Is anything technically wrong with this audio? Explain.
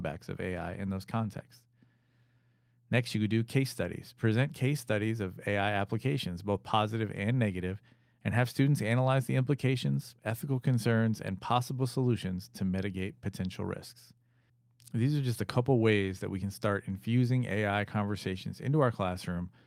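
No, nothing is technically wrong.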